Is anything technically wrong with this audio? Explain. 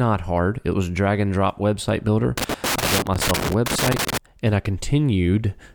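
Yes. Loose connector crackle from 2.38 to 4.18 s, just after "and drop website builder" and before "and I": a worn contact making and breaking chops the speech into irregular scratchy bursts.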